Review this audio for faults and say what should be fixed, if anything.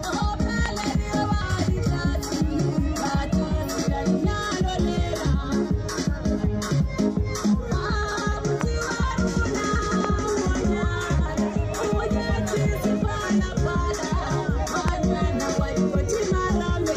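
Loud pops occur as a pair between 0.66 and 0.86 s, then singly at 8.61–8.63 s, 10.05–10.07 s and 14.88–14.90 s, each peaking around 15 dB above the surrounding audio. A sudden voltage step, likely from a plug, switch, static discharge or driver glitch, is added to the signal, and the sound continues beneath each pop. On a waveform each shows as a tall narrow spike, and on a spectrogram as a thin vertical stripe spanning all frequencies. Secure connections, ground the equipment and avoid switching during recording.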